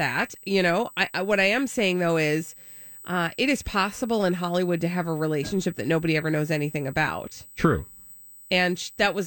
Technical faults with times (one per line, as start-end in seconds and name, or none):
0.00-9.26 USB whine